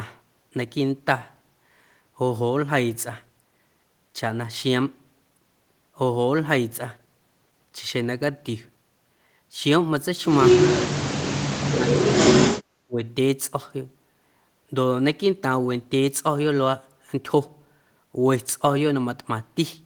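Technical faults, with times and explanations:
10.60 to 13.02 s, speech suppressed in double talk: the speech drops out in short bites at 10.60–10.67, 10.86–11.10, 11.69–11.88, 12.06–12.18 and 12.86–13.02 s, each lasting roughly a tenth to a fifth of a second and sinking by about 25 to 40 dB, so syllables vanish in pieces. The likely cause is an echo canceller that heard both ends at once, mistook this talker for returning echo, and turned the signal down.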